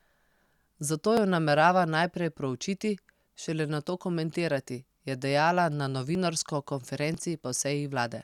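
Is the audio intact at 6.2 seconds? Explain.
No, not quite. At 6.15 s, just before that moment, there is an overlap between stream segments. The speech is carried in 1-second segments, and the timestamps of two neighbouring segments overlap slightly. Playback discards the duplicated span even though that sound was never actually doubled, so about 3 ms of real speech is lost. The result is a brief click or tiny skip. On a waveform the trace jumps abruptly at that point, and a spectrogram shows a thin vertical broadband line.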